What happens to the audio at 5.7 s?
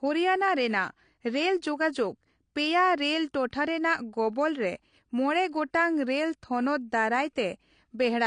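Nothing changes specifically at 5.7 s. The speech there carries the same AAC compression damage heard across the whole clip: nothing above 9.8 kHz, dull and smeared sibilants, and a warbling texture. This is likely low-bitrate AAC-LC coarsely quantising frequency lines, consistent with roughly 32 kbps.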